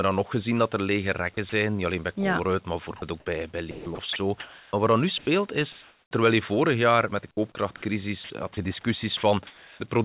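A speech clip carried over a call path whose band stops at 4 kHz, which fits G.711 A-law at 64 kbps. Sound chopped by the voice detector occurs at 1.34–1.52 s, 2.84–3.02 s just before "ook bij bij", 3.71–4.73 s, 8.24–8.57 s and 9.17–9.8 s. Speech edges flicker into synthetic fill, likely from repeated detector switching. Comfort noise in place of the background follows "wat er nu" at 5.18–5.27 s, then recurs at 5.72–6.11 s. The real background, about 36 dB below the speech peaks, becomes flat noise, likely because transmission paused. Its level rises about 3 dB, then dips about 1 dB. Sound dropped by the voice detector appears at 7.31–7.37 s, after "vorig jaar met de". Roughly 30 ms of speech gives way to steady noise, likely because the detector mistook it for background.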